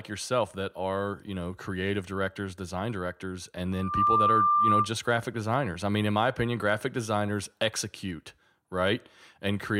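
Loudspeaker feedback squeal interrupts this speech from 3.72 to 4.90 s, after "directors design directors and": a microphone re-amplifies its own loudspeaker, so a 1.2 kHz tone swells over about a third of a second to roughly 10 dB above the voice.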